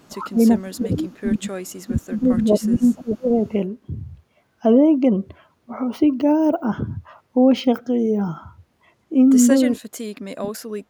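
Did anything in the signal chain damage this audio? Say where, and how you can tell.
Yes, in the call processing. Faint delayed repeats of the speech surface at 0.00–0.05 s, 1.67–1.72 s and 2.74–2.90 s, trailing by 440 ms, mostly about 40 dB down but louder, about 25 dB down, at 2.74 s. This echo leak likely comes from an echo canceller passing residual loudspeaker pickup back into the call.

The speech sinks sharply at 0.08–0.41 s, 0.60–1.52 s, 1.87–3.42 s and 9.81–10.90 s, dropping by roughly 20 to 25 dB and by around 40 dB in the last stretch. This is speech suppressed in double talk, likely the canceller ducking the talker while the far side was also active.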